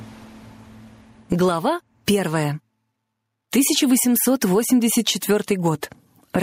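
Right from the start and all the way through, there's gain pumping. The level keeps getting yanked down the instant something loud arrives, a swing of roughly 15 dB. The likely culprit is input gain set way too hot, with a fast limiter or compressor clamping down on every peak. That's why loud and soft bits sit so close together, and the whole thing sounds squashed and breathing.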